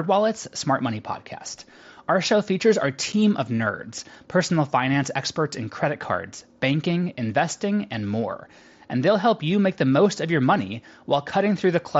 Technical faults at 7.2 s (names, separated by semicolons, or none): none